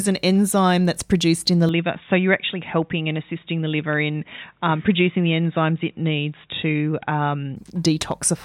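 From 1.69 s, after "that's produced in the", input likely switched to a poorer device. The speech loses everything above 3.8 kHz and sounds dull and slightly quieter until 7.56 s.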